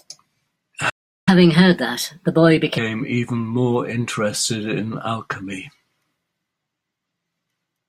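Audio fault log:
0.89–1.29 s, playback stall: the speech cuts out mid-flow and leaves roughly 0.37 s of silence before the speech resumes. The likely cause is the player running short of buffered data, or its thread being blocked, so nothing reached the output.
1.29–2.78 s, catch-up at higher speed: straight after the gap the speech runs 1.25 times faster and sounds raised by about four semitones, then settles back. The player is resampling its backlog to recover the lost time, so speed and pitch rise together.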